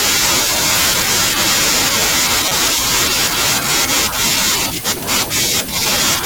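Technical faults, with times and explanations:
1.09 s: repeated buffer. Audio arrived late, so a very short slice replayed once. The hard joins make a click, which fits a 5 ms buffer.
2.48 to 2.57 s: corrupt frame decoded. Damaged compressed data across a few frames was played anyway, scattering energy wrongly. This gives a loud burst, peaking near -5 dBFS.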